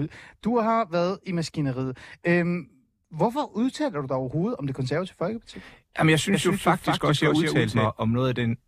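A second, slower capture path or a misaligned edit is likely feeding the speech in twice, producing a doubled audio track from 6.34 to 7.86 s: a dry, full-band copy trails roughly a fifth of a second behind, somewhat quieter, appearing and vanishing abruptly.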